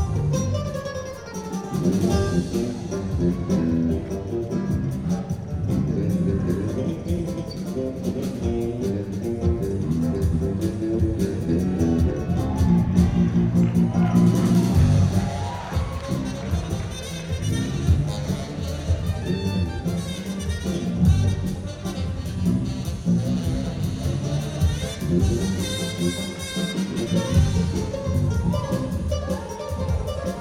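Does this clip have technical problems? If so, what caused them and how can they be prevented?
No, the signal holds steady and shows no technical faults anywhere in the clip, so there is nothing that needs preventing.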